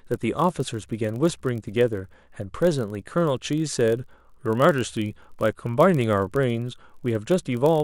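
Throughout the speech, a block size mismatch (padded) inserts a brief silent gap in every block, giving a steady 43.1 Hz buzz that fits 1024-sample reads. The timbre stays at 0.999× speed, unlike a sample-rate error.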